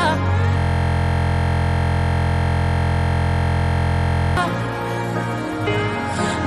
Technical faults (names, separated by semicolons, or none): system hang loop